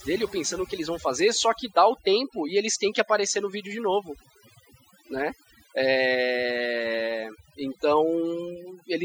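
Overdone noise removal runs through the whole speech clip. Set far too strong, it drops each frequency band near its noise estimate, taking quiet parts of the voice too. Unlike a noise gate, which mutes everything together, it leaves twinkling specks in near silence.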